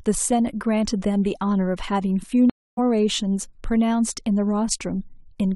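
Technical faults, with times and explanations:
2.50–2.79 s, stream reconnect: the connection breaks, leaving 275 ms of silence, and a fresh decoder resumes the stream roughly a third of a second later, so some speech is skipped. Waveform and spectrogram show a flat, empty gap, then the audio fading back in.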